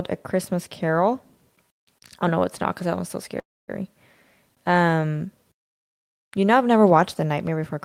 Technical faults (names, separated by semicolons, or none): call audio freeze